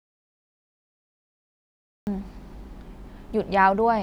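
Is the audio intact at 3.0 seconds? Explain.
Yes, at 3.0 seconds the audio is intact, with no fault audible at that moment.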